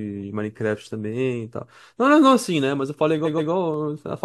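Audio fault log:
1.13 s and 3.74 s, dropped samples: each is a single sharp click, a thin vertical line across the spectrum. The waveform jumps abruptly to a later value, likely because a fraction of a millisecond of samples went missing. That is far too short to remove any audible sound.
3.24–3.50 s, repeated frames: the speech stutters as a 128 ms block plays twice more. The duplicated block stretches the clip by 256 ms.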